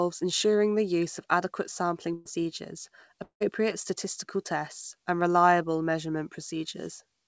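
At 2.14 to 2.27 s, right after "use of adequate sampling", a burst of packet loss occurs. About 120 ms of speech never reaches the receiver. The receiver fills the hole for roughly 110 ms by extending and fading the last sound, then resumes later with that stretch missing.

At 3.23 to 3.42 s, just before "statistical tests and reliable", the speech stretches into a fading tail for about 170 ms, then holds about 100 ms of silence. About 180 ms of speech is gone when it returns. This is likely a long network dropout.

Throughout, the band-limited sound of the G.722 call codec is audible, with nothing above 8 kHz.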